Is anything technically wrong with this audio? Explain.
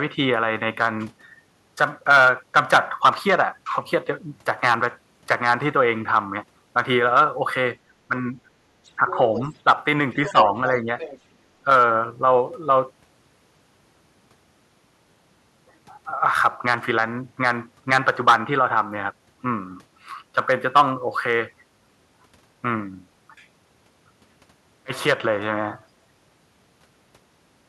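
Yes, there are two echo-canceller problems around 8 to 11 seconds.

Speech suppressed in double talk at 8.08–8.37, 8.97–9.18 and 10.24–10.58 s: the talker dips by about 5 dB, likely because the canceller ducked everything while both sides spoke.

The other side's voice leaks through at 8.84–9.42 and 10.12–11.2 s, about 15 dB under the talker, likely residual loudspeaker echo the canceller didn't fully remove.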